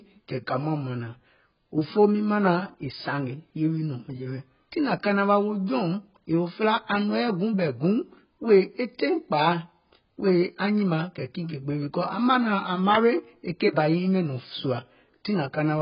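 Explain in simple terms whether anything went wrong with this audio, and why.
Yes. The speech sounds dull and muffled from start to finish, with nothing above about 5.1 kHz, and the high-frequency hiss and crispness of consonants is gone. Sustained sounds also have a smeared, watery warble. That combination points to heavy AAC compression, likely squeezed very hard to save space. A plain low-pass filter would only cut the top and leave the rest clean. Here the remaining sound also shimmers and smears.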